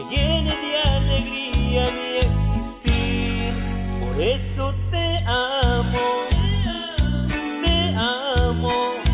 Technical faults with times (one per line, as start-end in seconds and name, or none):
none